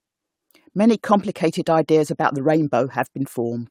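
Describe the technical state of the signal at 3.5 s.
At 3.5 s the speech signal is intact, with no audible fault at that moment.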